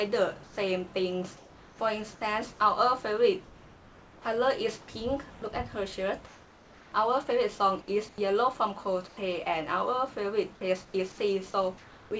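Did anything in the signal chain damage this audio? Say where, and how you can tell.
Yes. At the call-processing stage, comfort noise in place of the background appears at 0.44–1.79 s, 3.44–9.17 s and 10.85–12.11 s. The real background turns into a steady, featureless hiss. On a spectrogram it is a smooth, uniform band; on the waveform, a flat, even noise floor. This is likely discontinuous transmission, with the receiver synthesizing noise during pauses.

The onset is clipped by the voice detector at 4.23 s, where about 20 ms is missing. The sound starts abruptly, without its soft attack. The waveform jumps straight from comfort noise to full amplitude, and the spectrogram shows a hard vertical edge. The detector likely responded late, so those opening moments were never sent.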